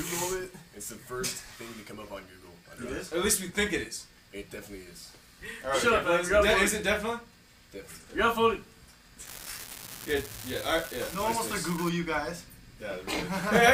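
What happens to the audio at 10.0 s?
At 10.0 s the audio is inside a stretch of unreliable data bit, running from about 9.26 s to 11.89 s. One line carrying a single bit of each sample is marginal, so that bit flips in a random share of samples, and every flip jumps the waveform by the same fixed step of about -21 dBFS. Those identical spikes pile up into a steady crackling fizz laid over the sound, continuing through quiet moments too, until it stops at 11.89 s.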